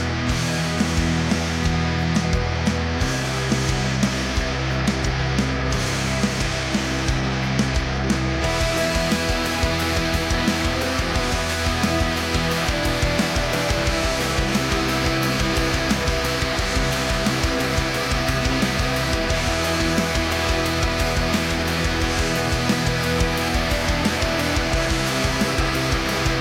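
Resampler restarted on every block, from 0.81 s to the end of the clip: the sample-rate conversion, which fits a change from 48 kHz to 44.1 kHz, treats each 10 ms block in isolation, so the filter lacks the true neighbouring samples at every block boundary and leaves a small error there. These errors repeat at 100 Hz, short enough to fuse into a steady buzz laid over the audio, audible whenever sound is present.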